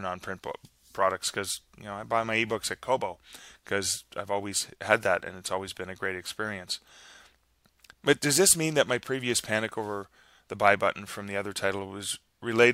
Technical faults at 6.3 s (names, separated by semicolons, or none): none